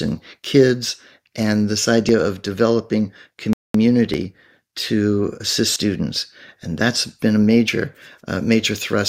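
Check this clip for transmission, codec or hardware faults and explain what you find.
The speech has two kinds of fault: several short skips and one silent stall.

Dropped buffers (overrun) at 2.09, 4.14 (just before "to assist"), 5.76 (just after "to assist") and 7.68 s (after "that's been a") each sound like a jump forward. About 20 ms is lost each time, about 70 ms at 5.76 s, likely because samples were overwritten before being read. The waveform shows an abrupt splice, and the spectrogram a thin vertical broadband line.

A rebuffering stall runs from 3.53 to 3.74 s. Playback starved and paused, adding 212 ms of silence before resuming exactly where it stopped, with nothing lost. The waveform shows a flat gap, and the spectrogram a blank vertical band.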